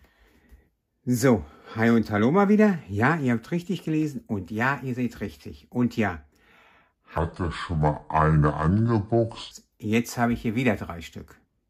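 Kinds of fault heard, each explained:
Section at the wrong speed: the likely cause is an editing or playback step that ran one stretch of the audio against the wrong clock, so it plays back at about 0.65 times its original rate. Between 7.18 and 9.51 s everything slows and drops in pitch together, by roughly seven semitones, so the sound turns deep and drawn out. At 9.51 s it snaps back to normal speed and pitch.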